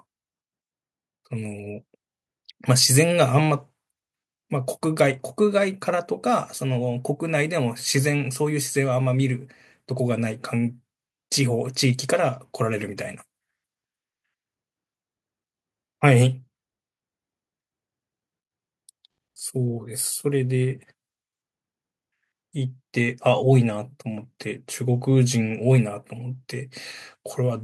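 From 1.29 to 4.8 s, automatic gain rising lifts speech and background together by about 3 dB; the waveform envelope and spectrogram brightness swell gradually across all frequencies.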